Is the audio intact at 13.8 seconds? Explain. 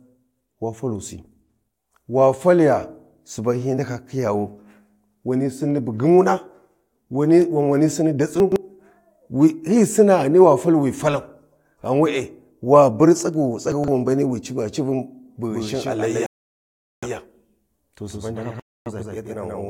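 No. Around 13.8 seconds the speech is garbled by chunks out of order, between 13.72 and 13.88 s. A 40 ms chunk of audio was held back and played three chunks too late, after material that should have followed it. Nothing is missing. The sequence is simply scrambled. You hear a brief jumbled stutter in the speech. There are three hard joins where the sequence breaks.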